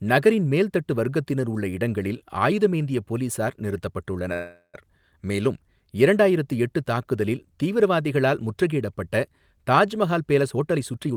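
A call audio freeze runs from 4.33 to 4.77 s, just before "மேலும் இரண்டாயிரத்து எட்டு தாக்குதலில்". The speech stops and the last sound is stretched into a fading buzz or hiss for about 400 ms, ending in roughly 70 ms of silence. The likely cause is packets held up in transit, which drained the jitter buffer. Nothing is lost: the speech picks up where it stopped, and everything after it now arrives about 400 ms later.

A jitter buffer speed-up starts at 10.19 s and lasts to the end. The speech runs at about 119% of normal speed with its pitch unchanged, so it sounds rushed. The buffer was holding more audio than its target, so the receiver repeatedly cut out short pitch-period slices to bring the delay back down. In total it removed roughly a fifth of a second.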